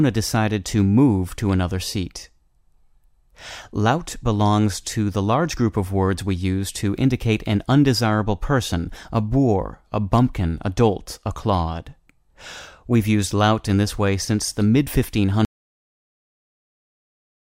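The input feed was likely lost near the end of this speech recording, so an audio dropout to silence runs from 15.45 s to the end, with no room tone.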